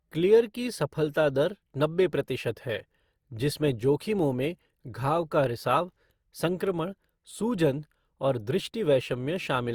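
Generation loss runs through the whole speech clip. The sound is swirly, smeared and hollow, and attacks blur. That is more damage than one encode at 64 kbit/s, consistent with Opus, would cause. It likely comes from about four lossy passes, each quantising on a shifted frame grid.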